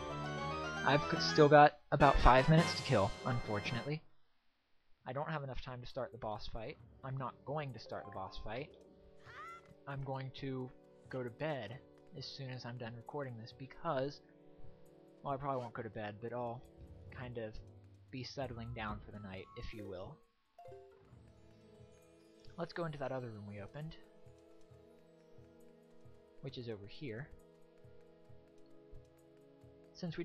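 From 3.1 to 4.34 s, a fast ticking rides on top of the sound as it drops by roughly 15 dB, a grainy zipping that lasts only as long as the level is moving. This is zipper noise: the gain change is applied in 1 dB steps, about ten per second, with no smoothing between them, so each jump leaves a small click.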